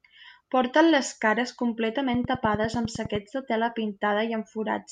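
It's a speech clip with a train of clicks running from about 2.14 to 3.16 s, ending just before "de tela". You get roughly ten near-identical pops at a steady 9.9 per second, standing well above the speech level, so they tick right over it. That regular, same-shaped pulse pattern is most likely interference from nearby gear or a faulty connection or power supply, repeatedly injecting a spike into the signal.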